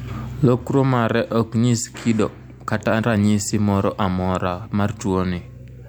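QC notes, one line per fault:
No problems turned up on this one; the speech comes across just as it should, so there's nothing to log.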